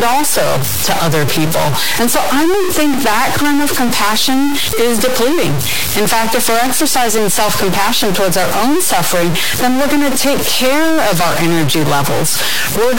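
Throughout the speech a harsh, buzzy distortion rides on everything, and the pauses fill with loud noise rather than silence. The likely cause is a stuck bit, a high-order one whose step is around -10 dBFS, flipping values with the waveform's sign and shape.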